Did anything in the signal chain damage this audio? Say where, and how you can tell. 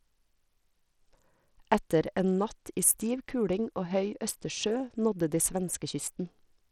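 Yes, at the codec stage, throughout the speech. The treble flickers and drops out, with gritty noise and aliasing riding on it. The likely cause is Bluetooth SBC compression, whose small bit pool starves the top sub-bands. The damage fits a low bitrate of around 80 kbps.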